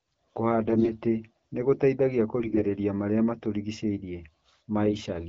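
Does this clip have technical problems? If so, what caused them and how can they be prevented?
Yes, there are three short bursts of AMR bit errors, at 0.67 to 0.89 s, 2.39 to 2.66 s and 4.86 to 5.00 s. The speech keeps roughly its pitch and level there but turns hoarse and gargly. On a weak radio link, several percent of the lightly protected bits in the AMR-WB frames (12.65 kbit/s here) arrived flipped. The checksum on the core bits still passed, so the decoder used the frames with misplaced excitation pulses and wrong gain and spectral values. Stronger channel coding or a more robust codec mode on poor links would keep those frames from being corrupted.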